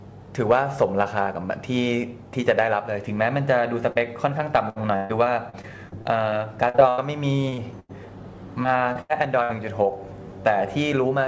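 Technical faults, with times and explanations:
3.92–3.97 s, short concealed packet loss. About 40 ms of audio never arrived in time. The receiver extended the preceding sound for roughly 33 ms and blended back. It is heard as a brief smear or wobble, and a short sound may vanish.
4.69–7.00 s, repeated packet loss (robotic sound). Thirteen separate gaps fall in this stretch, about 520 ms missing in all, the longest about 138 ms. Roughly a fifth of the span is patched audio. Each patch repeats the last sound before the next gap arrives, giving a choppy texture with pieces missing.
7.50–7.60 s, short concealed packet loss, two back to back. The first covers 20 ms, the second 40 ms. Each hole was filled by continuing the sound before it. Together they make a quick wobble or smear.
7.80–7.91 s, burst of packet loss. About 100 ms went missing at once. The receiver continued the last sound while turning it down, so it becomes a held buzz or fading hiss. 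The audio then resumes further on, with that tenth of a second gone.
8.63–9.51 s, repeated packet loss (robotic sound). Four gaps here, about 180 ms missing, the longest about 81 ms. About a fifth of the span is concealed. The repeated patching again gives a choppy quality. The cut-off above 8 kHz fits G.722 at 64 kbps.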